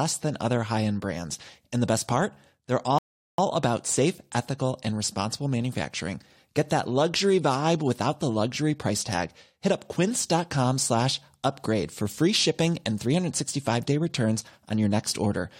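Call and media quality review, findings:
Rebuffering stall, 2.98–3.38 s: player buffer ran dry, playback paused awaiting download. Speech drops to silence, resumes exactly where it stopped; nothing lost, about 0.4 s added.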